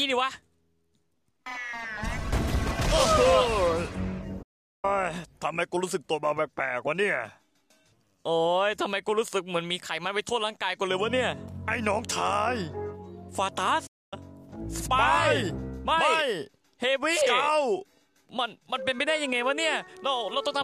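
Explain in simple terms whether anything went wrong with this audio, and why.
Playback stall at 4.42 s and 13.86 s: the sound goes silent for 0.41 s, then 0.25 s. The player likely ran out of data or was briefly blocked.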